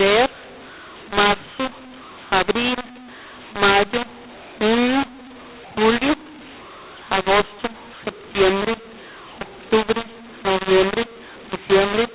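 Harsh, gritty distortion runs through the whole of the speech, with some levels blown up and others squashed, and the pauses filled with hiss instead of silence. It is mu-law and A-law mixed up: the 8 kHz telephone audio was coded as A-law but read back as mu-law.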